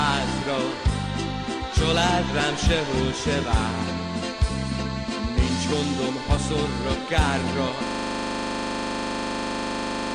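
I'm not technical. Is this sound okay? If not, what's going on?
No. From 7.87 s to the end, a system hang loop occurs: the computer froze while the sound hardware kept replaying its last 40 ms of audio, 57 times in a row. That turns the sound into a steady buzz, repeating 25 times per second.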